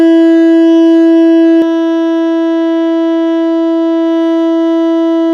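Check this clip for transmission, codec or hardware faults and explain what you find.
One fault is present: a doubled audio track from the start of the music to 1.62 s. Every event is repeated about a fifth of a second later at roughly equal loudness, with no decay or room colour, then the repeat cuts off abruptly. The likely cause is a second, slower capture path or an out-of-step edit mixing in a duplicate copy.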